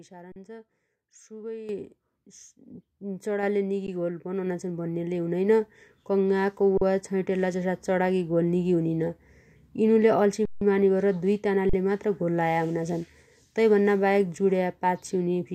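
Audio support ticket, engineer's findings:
Underrun with held sample, five times: 0.32 s (40 ms), 3.87 s, 6.77 s (40 ms), 10.45 s (160 ms, the longest), 11.69 s (40 ms). Sound freezes flat, no real click going in. Output buffer running dry, converter holding its last value until data shows up. Nothing skipped, playback picks up where it left off, so the restarts come back soft. Worth looking at playback scheduling or buffer headroom.

Microphone volume stepped up twice: 1.69 s, jump of about 9 dB; 3.43 s, another of about 4 dB. Speech and background noise jump together, a single hard step each time with no ramp. Points at the call app's auto gain raising the device input volume because it judged the mic too quiet. Suggest turning off automatic mic adjustment or fixing the input level.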